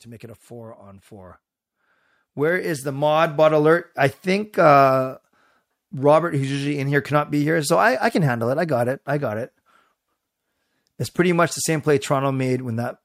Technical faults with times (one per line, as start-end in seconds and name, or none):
0.05-1.44 automatic gain rising
2.20-3.82 automatic gain rising